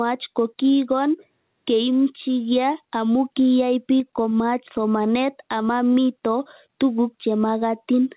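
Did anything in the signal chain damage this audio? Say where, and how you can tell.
Yes. There is gain pumping throughout the speech: the level ducks by around 10 dB whenever a loud syllable arrives, so loud and quiet passages sit unnaturally close in level. The likely cause is input gain set far too high, with a fast limiter or compressor in the capture or call-processing stage clamping each peak. On a waveform the envelope looks flattened. A spectrogram shows nothing above the 4 kHz ceiling of the narrowband call path.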